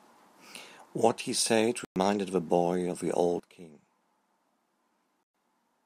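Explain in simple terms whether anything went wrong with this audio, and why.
Yes, a couple of things went wrong. The speech cuts out for about a tenth of a second at 1.85 to 1.96 s and again at 5.23 to 5.34 s, then picks up further along. That's likely a Bluetooth dropout, where bits of audio never reached the headphones. At 3.40 s everything, background included, suddenly gets a lot quieter and stays that way to the end. That's likely a sudden gain jump, a volume change applied instantly instead of eased in.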